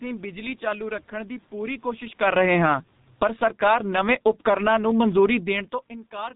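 The whole clip passes through a G.723.1 codec. Its 30 ms frames and low bitrate, which fit about 6.3 kbit/s, leave heavily muffled, hoarse speech with smeared consonants. From 2.11 to 3.68 s, between "ਰੱਖਣ ਦੀ ਪੂਰੀ" and "ਨਵੇਂ ਉਪਕਰਣਾਂ ਨੂੰ", automatic gain falling pulls the level down by about 14 dB, so the voice and the background sink together.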